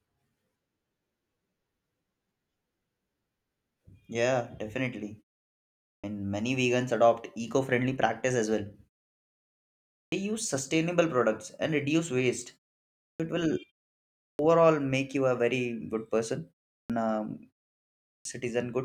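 Clipped start after a pause occurs at 5.93, 10.0, 13.08, 14.29, 16.79 and 18.14 s. After each silent gap of 0.34 to 1.19 s, the output device has gone idle and needs time to wake, so the first 100 to 120 ms of speech is lost and the words begin abruptly.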